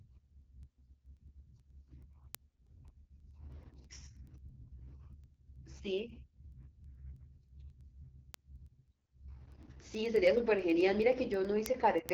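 Speech, heard throughout through an AMR wideband (HD Voice) codec: rough, raspy texture and nothing above 7.2 kHz, which fits one of its lowest bitrates, around 8.85 kbit/s, rather than plain band-limiting. From 0.20 to 12.09 s, word clock ticks recur about every tenth of a second, roughly a hundred in all. Their steady rhythm sets them apart from random dropouts or crackle, and each fits a single dropped or repeated sample from an unlocked clock running about 200 ppm off.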